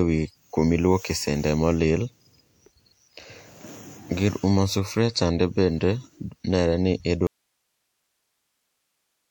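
Speech, where the signal feed was likely lost at 7.27 s with the path still live: an audio dropout to a faint residue, leaving only hiss, about 50 dB down, until the end.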